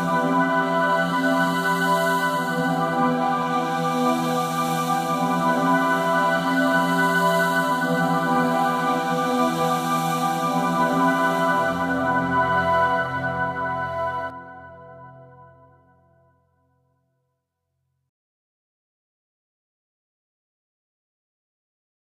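A doubled audio track runs from 4.68 s to 14.30 s: a second, full-band copy of the same sound plays roughly one and a half seconds behind the original and only a few decibels quieter, around 5 dB down. The echo has no decay or room colouring, and it cuts in and out abruptly at both ends. The likely cause is a second capture of the signal through a slower path, or an edit that left two out-of-step copies mixed together.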